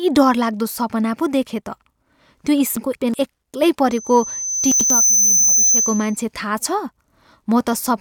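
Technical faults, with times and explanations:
2.77–3.14 s and 4.72–4.90 s, frames out of order: In each stretch, two neighbouring blocks of frames reached the decoder in swapped order and were played that way. The first stretch has its two halves of about 186 ms exchanged, which fits blocks of two frames each. The second has halves of about 93 ms, which fits single frames. Each stretch sounds like a garbled flutter, and the timing around it stays intact.
3.9–6.2 s, loudspeaker feedback squeal: A microphone picked up the loudspeaker it was feeding. At 6.1 kHz the loop's gain went above unity, so that frequency kept re-amplifying itself. It grows over about a second into a piercing single-pitch squeal that sits roughly 5 dB above the speech. It then holds until around 6.2 s.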